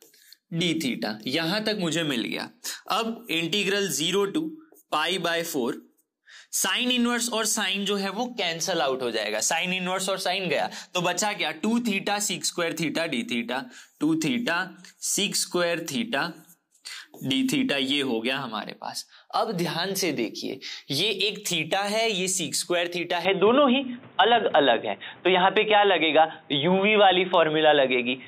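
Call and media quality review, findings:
Input switched to a poorer device, from 23.25 s to end. Sound abruptly dulls, with nothing above 3.8 kHz, a noticeable level shift, and a different background noise well under the signal. No gap at the change. Likely a capture-device or headset-profile switch; the new noise floor and level distinguish it from a codec bandwidth drop.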